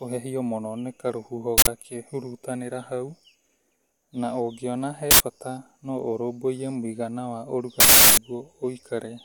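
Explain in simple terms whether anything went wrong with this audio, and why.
Three harsh digital bursts interrupt the speech at 1.58, 5.11 and 7.80 to 8.17 s: an uninitialised buffer, where leftover memory got played as sound before real audio arrived.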